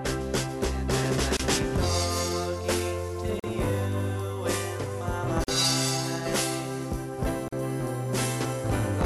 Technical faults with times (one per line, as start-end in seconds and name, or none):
1.37-1.40 gap at a join of encoded pieces
3.40-3.44 gap at a join of encoded pieces
5.44-5.48 gap at a join of encoded pieces
7.48-7.53 gap at a join of encoded pieces